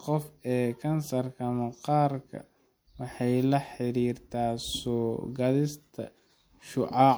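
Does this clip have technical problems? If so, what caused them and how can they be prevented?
Yes. At 3.14 s, just before "la xiriirtaa", a brief click-like stutter is a repeated buffer: a roughly 11 ms chunk, which fits a 512-sample buffer, played twice when fresh audio arrived late. Larger playback buffers or higher audio-thread priority would prevent this.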